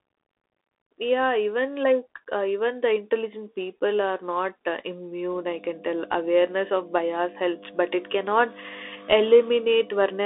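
From the first moment the speech sounds boxed-in and telephone-like: the band runs only from about 300 Hz to 3.6 kHz, with nothing at all above 3.8 kHz, and a grainy hiss sits under every phrase while s sounds come out scratchy. This is the Bluetooth CVSD headset codec, and its damage is plainly audible. The codec tracks the waveform one bit at a time, each bit saying only up or down, with a step size that adapts. Loud high-frequency energy outruns that step and distorts, and the coarse stepping leaves the granular noise. The heavy band-limiting and texture fit a 64 kbit/s CVSD link.

At 5.30 s, right after "people are not uh", a steady low drone comes in and stays to the end of the clip. This is mains hum at 50 Hz, and it is strong, roughly 10 dB below the speech, so it is clearly heard beneath it. Power-line current has leaked into the signal path, most often through a ground loop or a nearby transformer. 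The result is a constant tone at the line frequency that does not follow the speech at all.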